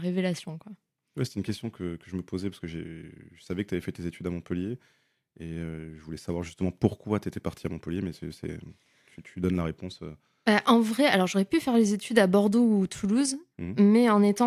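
No technical faults can be heard anywhere in the speech.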